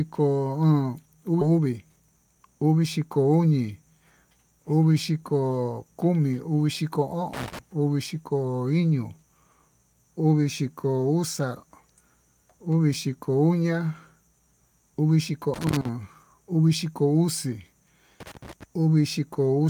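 From 1.51 to 2.36 s, a jitter buffer speed-up runs the speech at 112% with unchanged pitch. About a tenth of a second of pitch periods is cut, so it sounds hurried. Loose connector crackle follows at 7.34 to 7.59 s, 15.54 to 15.89 s and 18.20 to 18.64 s. A failing contact chops the signal into irregular scratchy bursts.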